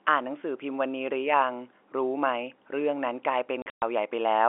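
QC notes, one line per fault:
3.62–3.82 s: packet loss filled with silence. 160 ms drops out in hard-edged gaps up to 120 ms long, which fits 20 ms packets.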